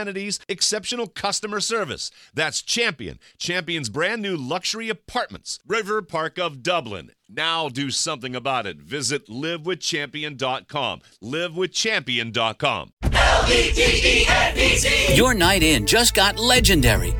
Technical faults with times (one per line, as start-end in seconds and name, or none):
none